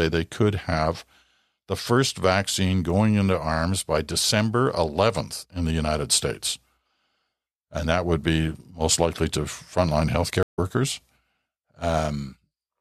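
At 10.43 s, right after "most likely to frontline", there is a stream reconnect. The connection broke and playback went silent for 150 ms. A fresh decoder then started mid-stream. At 10.60 s the speech resumes roughly 150 ms further on, skipping a short stretch.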